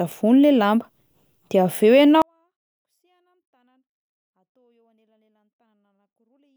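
At 2.22 s the speech drops about 48 dB to near silence but stays clean: a 24-bit alignment error, 24-bit samples in a 32-bit word read as full 32-bit values.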